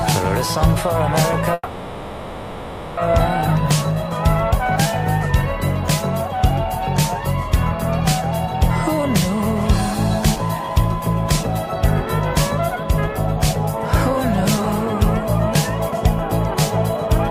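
A call audio freeze runs from 1.53 to 2.99 s. The sound stalls and the last moment is stretched into a buzz or hiss that fades, ending in only about 20 ms of silence before the audio resumes where it left off. The likely cause is packets held up in transit, draining the jitter buffer so the receiver had to improvise about 1.44 s of filler. Nothing is lost, but everything afterwards arrives 1.44 s later than it should.

Jitter buffer speed-up follows in two stretches: 10.36 to 14.28 s at 103% speed, and 15.23 to 17.10 s at 104%. Here the buffer was holding more audio than its target, and to shrink that backlog the receiver repeatedly cut out tiny slices of one or a few pitch periods, roughly 150 ms in the first stretch and 100 ms in the second. Pitch stays unchanged while the pace quickens, both times staying under the rate where things start to sound clearly hurried.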